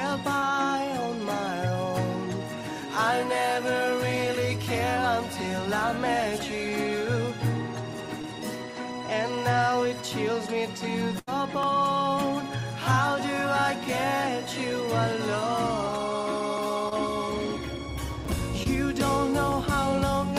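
At 0.39 to 0.44 s comes the first short concealed packet loss, where about 20 ms of audio never arrived in time. The receiver extended the preceding sound for roughly 23 ms and crossfaded back, so the moment smears or wobbles. On a spectrogram, the harmonics or noise texture just before the gap are stretched unnaturally smooth, without the fine variation around them. The same happens at 8.22 to 8.25 s, 16.89 to 16.93 s and 18.63 to 18.67 s.

At 7.93 s a block of digital silence about 1 ms long drops the signal straight to silence and back with no fade. It is heard as a sharp tick. The waveform shows a flat line with vertical edges.

From 11.19 to 11.29 s a burst of packet loss removes about 80 ms. The receiver kept the last sound going and let it decay, so it becomes a brief held buzz or fading hiss before the audio jumps ahead. On a spectrogram, frozen, dimming bands run into an abrupt restart.

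More digital-silence blocks follow at 11.63 s and 16.58 s, each about 1.3 ms, which fits a 64-sample buffer at 48 kHz. A longer 5.3 ms hole at 18.25 s fits a 256-sample buffer and still sounds like a tick or dip.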